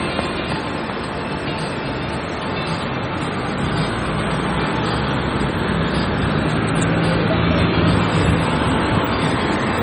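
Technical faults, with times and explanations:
Throughout, MP3 compression: the audio has a watery, swirling texture with smeared transients. Heavy damage like this points to a low bitrate of around 32 kbps. Squeezed that hard, the encoder likely dropped everything above a fixed cut-off and let weak frequency lines flicker between frames. On a spectrogram this shows as scattered, blinking islands of energy. The waveform shows softened, pre-echoed attacks.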